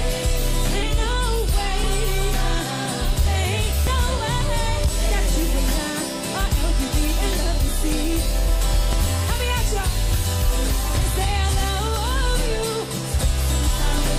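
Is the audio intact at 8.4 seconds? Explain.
No. From 0.83 to 13.98 s, periodic USB or driver dropouts skip roughly 10 ms of audio every 1.01 s, producing regular ticks through 8.4 s.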